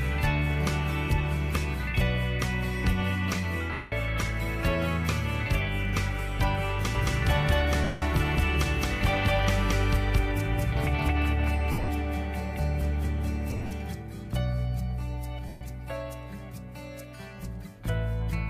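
At 3.73 to 3.92 s comes the first of five bursts of lost LE Audio frames: about 190 ms of audio never arrived, and the LC3 decoder filled the gap by replaying the last spectrum with scrambled phase, fading it as the gap went on. It sounds like a brief hiss-like smear where tonal detail dissolves. A spectrogram shows the harmonic lines turning into a flat, grainy block that dims towards its end.

From 6.95 s to 13.93 s a doubled audio track runs: a second copy at about the same level trails by around a fifth of a second, likely from a slower second capture path or two misaligned copies in an edit. Every onset has a dry, equally loud twin with no reverberant tail. The copy appears and vanishes abruptly at both ends. The waveform shows each transient repeated at a constant spacing, and the spectrogram shows the whole pattern duplicated, offset in time.

At 7.84 to 8.02 s a second frame loss of about 180 ms gives the same smeared dropout.

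At 11.72 to 11.88 s the losses are scattered over about 160 ms, with the longest run around 70 ms. This gives a stuttering mix of short smears and brief returns of clean audio.

At 13.51 to 13.71 s the losses are spread over about 200 ms in shorter runs, the longest around 40 ms.

At 15.48 to 15.61 s a final 130 ms gap produces one more short noisy blur that decays into quiet.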